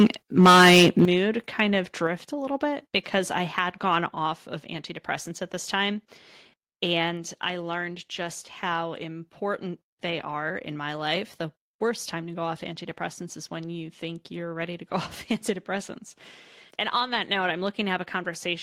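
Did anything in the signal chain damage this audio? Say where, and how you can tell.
Yes. At the converter stage, the likely cause is microphone overload: input gain driving peaks beyond full scale. From 0.0 to 0.07 s and again from 0.38 to 1.05 s, just before "kind of", peak tops are flattened, about 8 dB and then about 13 dB over, giving a harsh, crackling edge.

In call processing, the microphone volume stepped down at 1.05 s, as "kind of" begins: software likely reacted to the clipping by cutting device input gain in one move. Voice and background drop together by about 11 dB, an abrupt level fall rather than a fade.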